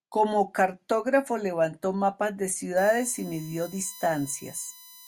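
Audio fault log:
2.77–5.08 s USB whine: after "cartógrafo levantó mapas de", 1 ms bus frames leak in as a fixed 1 kHz whine, strongest at 4 kHz, about 20 dB below the speech, showing as flat horizontal lines on a spectrogram.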